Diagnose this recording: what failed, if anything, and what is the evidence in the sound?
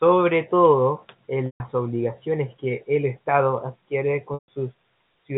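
Packet loss with pitch repetition, a network-stage fault, occurs at 1.46–1.60 s, between "todo en" and "obligaciones que el", and again at 4.34–4.48 s. Each 140 ms gap, consistent with roughly seven lost packets, is bridged by the receiver's G.711 A-law decoder. It repeats the last pitch period, fades it to silence, then cross-fades back into the speech.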